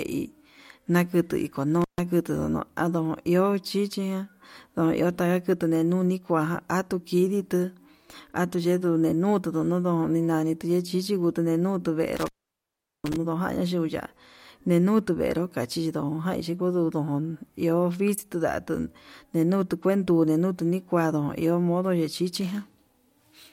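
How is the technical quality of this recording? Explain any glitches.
The recording has two intermittent contact faults, at 1.82 to 2.00 s and at 12.17 to 13.16 s. A loose cable or plug briefly opens the signal path, and the speech cuts out for about 0.14 s and then for about 0.76 s, leaving faint hiss. Crackle at each edge, from the contact scraping open and shut, tells this apart from a digital dropout, which falls to clean silence with sharp, quiet edges.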